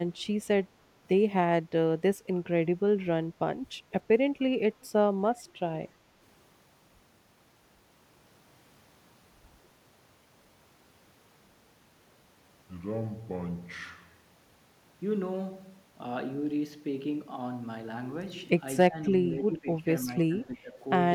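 Echo leak at 4.81 to 4.88 s: a brief, very faint copy of the speech returns about 289 ms after the original, far below the main level. This is likely a loudspeaker echo on the far side that its echo canceller left partly uncancelled and sent back.

Speech suppressed in double talk between 18.89 and 20.82 s: the talker's level dips in pieces, by roughly 15 dB at the deepest, over about a second in total. The likely cause is an echo canceller mistaking overlapping talk for echo and turning it down.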